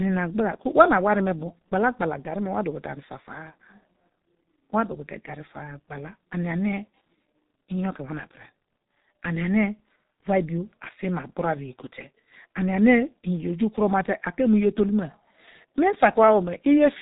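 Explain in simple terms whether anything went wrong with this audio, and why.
Yes, something went wrong for the whole recording: the speech has passed through a G.723.1 codec, an old internet-phone compressor. Nothing above roughly 4 kHz survives, so voices sound muffled, and because the codec rebuilds speech from a coarse, slowly updated model in 30 ms chunks, they also sound hoarse, with smeared consonants. A plain muffling filter would dull the sound but keep it clean, while here the damage is heavy and grainy.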